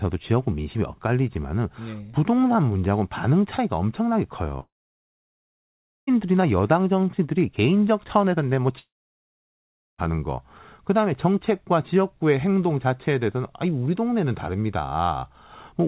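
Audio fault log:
4.60–6.09 s and 8.79–10.00 s, long network dropout: each gap starts with a brief buzzy smear of the last sound fading within less than a tenth of a second, then roughly 1.4 s and 1.1 s of silence before the audio resumes with that stretch missing. The likely cause is a run of lost packets that the receiver could only cover briefly.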